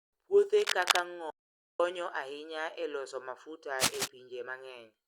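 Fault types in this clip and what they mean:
Cable scratch noise: Dense, uneven crackling bursts rise to about the level of the speech from 0.53 to 1.00 s and again from 3.79 to 4.08 s, right after "ahinya e loso mafuta", most likely from a worn cable or connector being moved.
Audio dropout to silence: From 1.30 to 1.80 s the speech cuts to silence with no room tone for about 0.49 s, then resumes on "ahinya e loso mafuta". The likely cause is a momentary loss of input while recording continued.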